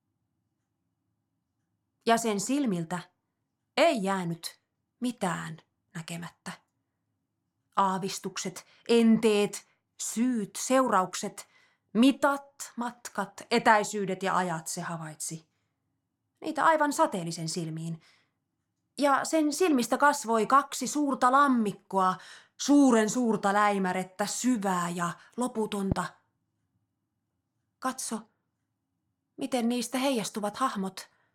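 At 25.92 to 25.94 s a single loud pop cuts through the speech, a sharp, short thump peaking around 15 dB above the surrounding level, while the talking carries on beneath it without a break. The likely cause is a sudden voltage step or pulse entering the signal chain, from a plug, a switch, a static discharge or a driver glitch, which the downstream circuitry rounds into a brief burst of energy laid on top of the audio.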